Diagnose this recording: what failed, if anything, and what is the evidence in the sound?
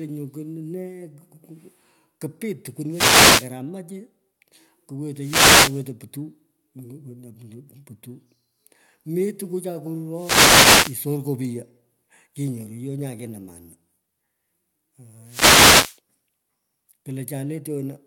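The radio link of an analogue FM wireless microphone faded repeatedly as reflected signals cancelled, causing wireless microphone noise hits. Receiver noise rose and was heard as short swishes of static at 2.89–3.50 s, 5.13–5.90 s, 10.12–11.03 s and 15.24–16.00 s.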